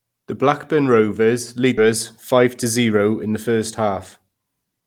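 Speech with two timing faults. At 1.77 to 1.90 s a skip ahead jumps forward: about a second of audio is missing, dropped in transit or discarded by an overflowing jitter buffer while later audio waited, so the two sides are spliced almost directly. On a waveform or spectrogram, the speech envelope and harmonic pattern change abruptly with no silent gap between them. From 2.34 to 3.00 s a jitter buffer speed-up plays the speech at 108 % speed with unchanged pitch. Roughly 70 ms is trimmed away in repeated pitch-period-sized pieces to shrink an overfull buffer, so it sounds slightly hurried. A spectrogram shows syllables compressed in time while harmonic spacing stays the same.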